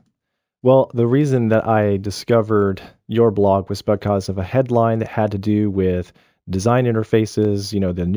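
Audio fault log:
Throughout: imaging from linear upsampling. The top end sounds dulled, with a faint metallic shimmer on sibilants. That fits a 16 kHz source raised to 44.1 kHz by straight-line interpolation, leaving a mirrored copy between 8 and 16 kHz, roughly 35 dB down.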